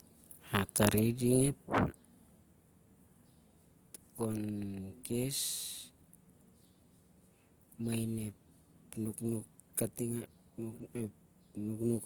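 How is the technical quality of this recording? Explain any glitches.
The recording has plainly audible compression damage that runs the whole length.

Throughout, the likely cause is Opus compression in its music (CELT) mode at a low bitrate, consistent with about 24 kbps. When bits run short, bands are filled with folded or noise content, so the speech sounds rough and grainy, though the audio still extends to 20.2 kHz.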